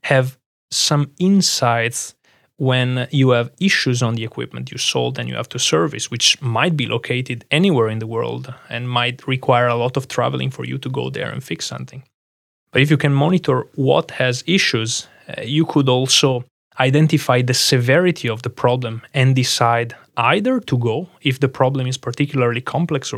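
No technical faults occur at any point in this speech recording.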